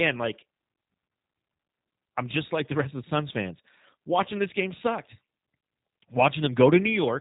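Throughout the speech, G.729 codec damage is plainly audible. Rather than storing the waveform, the coder rebuilds it from a vocal tract filter, a pitch predictor and a sparse pulse pattern, which fits an 8 kbit/s G.729A stream. The result sounds rough and synthetic, and nothing passes above 3.8 kHz.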